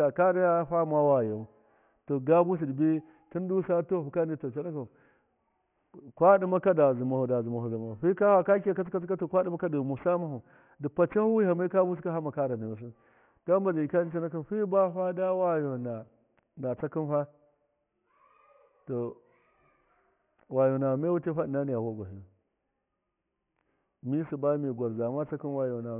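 Aliasing runs through the whole recording, from start to finish. The speech was brought down to a much lower sample rate, which fits a rate of about 6 kHz, with no filter applied first. Everything above 3 kHz folded back below that point. Sibilants come out gritty and metallic, with false tones that don't belong to the speech. The folded energy sits about 30 dB under the signal. The spectrum stays full right up to 3 kHz.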